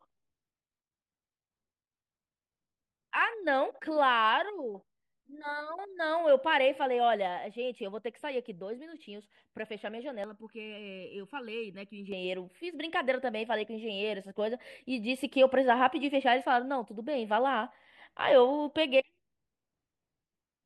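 From 10.24 to 12.12 s, channel delay (comb filtering): a sub-millisecond lag, summed to mono, hollows the speech; a spectrogram shows evenly spaced notches from around 700 Hz.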